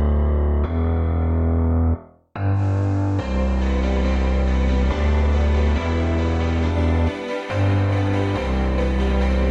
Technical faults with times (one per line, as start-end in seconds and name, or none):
2.52-6.79 digital radio blending to analogue